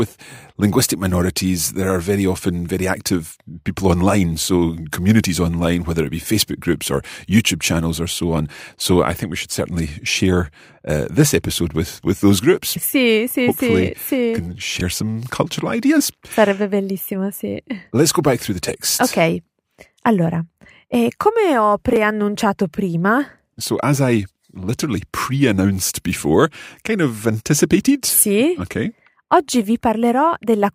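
Chunks out of order occur at 14.77 to 14.81 s, just before "some cultural ideas", and again at 21.93 to 21.97 s, right after "allora eh come ho". In each spot a 10 ms chunk of the speech arrives three chunks late and plays after the audio that should follow it. No sound is lost, but the scrambled 40 ms span has three hard joins, heard as a brief jumbled stutter.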